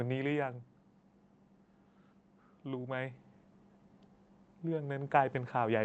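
Right at the start of this speech recording you can hear automatic gain falling: from 0.05 to 0.75 s the gain control decides the input is too hot and pulls its gain down by about 3 dB, so the voice and its background sag together after a loud opening. Then near the end, from 4.63 s to the close, there's automatic gain rising, where the control judges things too quiet and eases its gain back up, letting voice and background swell as one over that last second or so. The call path sits underneath all this, with the top end capped around 8 kHz.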